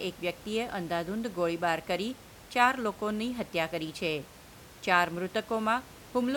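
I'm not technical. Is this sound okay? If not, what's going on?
Yes, the signal is in good technical shape; the only extra sound is some quiet background noise from the room, which sits well below the speech and comes from the recording space rather than from the equipment.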